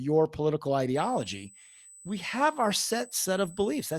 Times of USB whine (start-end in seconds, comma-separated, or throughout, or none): 0.95-3.99